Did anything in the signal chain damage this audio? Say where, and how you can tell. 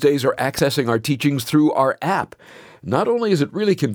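Yes. A single loud pop at 0.59 to 0.61 s, just before "our teachings through our", peaks a few dB above the speech, which carries on beneath it rather than dropping out. That points to a likely voltage transient in the analogue wiring, not a digital gap.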